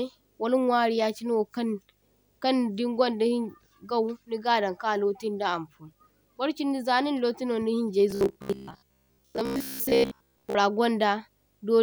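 A speech clip with two faults. Video or display buzz runs throughout. A 50 Hz buzz at the picture's field rate carries hash above it, plus a faint 15.6 kHz line-rate tone. It sits around 45 dB below the speech, so it is quiet but constant. From 8.11 to 10.55 s the speech turns robotic, a rigid metallic 66.8 Hz buzz that loosely follows the words. This is likely robotic sound from repeated short buffers. Audio arrives too seldom, and a slice of about 15 ms gets replayed in place of the skipped material. Most of that stretch is repeats.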